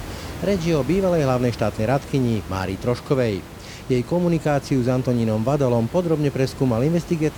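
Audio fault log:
The speech signal shows no technical faults, with the room's own background noise sitting about 15 dB below the speech as part of the recording.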